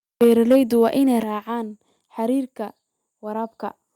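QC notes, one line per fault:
0.21–0.83 s, microphone overload: the loudest syllables carry a harsh, crackling edge up to just before "waa inay". The likely cause is input gain set so high that peaks ran about 5 dB past the converter's ceiling, slicing off their tops across a few percent of samples. On the waveform the peaks sit as flat plateaus. A spectrogram shows broadband smearing above the harmonics at each clipped peak.
0.24 s and 1.23 s, microphone volume stepped down: voice and background both drop suddenly, by about 3 dB at 0.24 s, inside the distorted stretch, and by about 7 dB at 1.23 s, just after "waa inay". This is likely the call software lowering the device's input volume in single steps in response to the overload. The waveform envelope shrinks abruptly at each point, and the spectrogram dims evenly across all frequencies at once.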